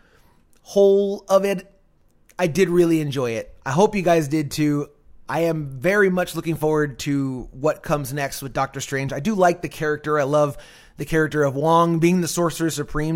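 From 1.84 to 2.69 s there are six CD scratch ticks, the longest about 2 ms, where a scratch beat the error correction once per disc revolution and the player patched over it.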